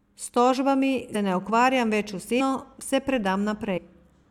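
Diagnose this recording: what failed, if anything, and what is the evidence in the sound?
Speech leaps forward three times, at 1.14 s, 2.39 s and 3.76 to 3.79 s, each join a soft smeared blip, not a click. Roughly 100 ms, then 150 ms twice, vanishes, matching multiples of a 23.2 ms codec frame: compressed frames skipped, lost or rejected at decoding.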